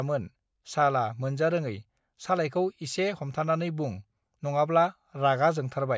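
Nothing here needs pointing out: the speech runs along without any technical faults turning up anywhere in the recording.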